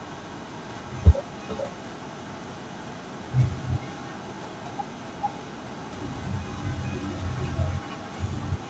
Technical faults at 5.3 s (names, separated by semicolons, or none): echo with no canceller